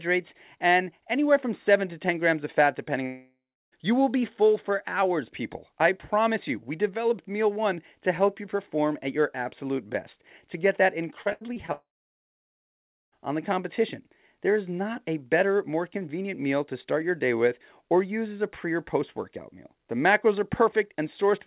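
At 3.06 s, just after "grams of fat depending", the stream stops, most likely a long network dropout, and about 0.66 s of speech never arrives. The receiver stretches the last sound into a fading buzz, then leaves roughly 0.3 s of silence before the audio resumes at 3.74 s with the missing stretch gone.

From 11.22 s to 11.70 s, after "best to get that", repeated packet loss punches seven holes into the stream, the longest 79 ms, and concealment patches about 38% of that half second. Each patch replays the preceding sound before the next gap hits, so the speech turns choppy, with fragments missing. All of it stays inside the 4 kHz band of the G.711 A-law call path.

What is likely a second long network dropout follows immediately at 11.72 s and lasts until 13.14 s, losing about 1.4 s. A brief concealment tail decays into about 1.26 s of silence, and the audio picks up again at "on the competition" with that section missing.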